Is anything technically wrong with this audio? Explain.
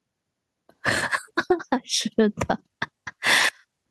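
Yes, there's gain pumping all the way through this speech, with the level swinging by around 5 dB. The likely cause is input gain set far too high, with a fast limiter or compressor clamping down on each loud moment and releasing in the gaps. That squeezes loud and quiet parts together, so the whole thing sounds flattened.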